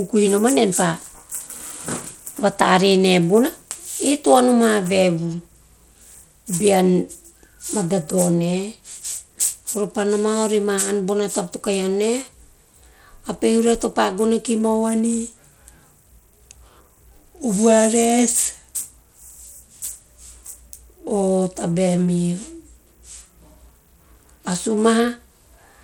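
From start to finish the speech carries plainly audible coding damage, most likely Bluetooth SBC compression at a low rate that fits roughly 96 kbps. SBC divides the signal into a few wide sub-bands and hands out bits without a hearing model, so the weaker upper bands are starved and the rest are coarsely quantised. The result is an unstable, thinned treble with a gritty grain riding on the speech, and nothing is present above 19.2 kHz.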